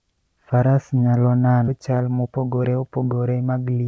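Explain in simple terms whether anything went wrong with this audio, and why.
A skip ahead at 1.68 to 1.70 s: about seven-tenths of a second of speech was thrown away and playback jumped straight to later audio, leaving almost no gap.

A jitter buffer speed-up from 2.26 to 2.68 s: the receiver had too much audio waiting, so it trimmed tiny slices, roughly a twentieth of a second in all. The speech runs about 10% faster at the same pitch.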